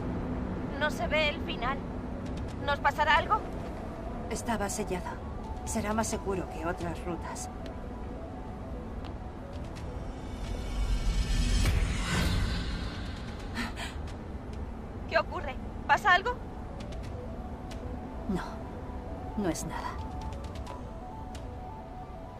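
From 10.23 to 15.37 s there is a call bitrate drop: the encoder was starved of bits, consistent with a fall from 96 to about 28 kbps, and coded everything coarsely, so the audio turns rough and muffled. A spectrogram shows the upper band abruptly darkening throughout that stretch.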